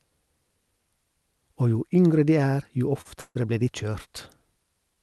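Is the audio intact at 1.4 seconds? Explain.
Yes, the speech is intact at 1.4 seconds, with no dropout, glitch or distortion at that point beyond the ordinary coding character of the call path it passed through.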